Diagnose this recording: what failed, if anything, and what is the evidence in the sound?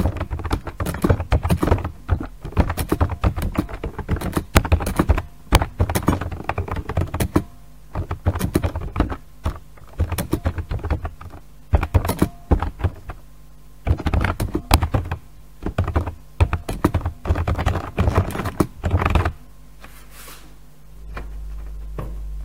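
Integer overflow in the sample-format conversion or gain stage. Violent cracks hit at 4.57, 5.55 and 14.74 s. Peaks about 1 to 2 dB over full scale wrapped to the opposite sign.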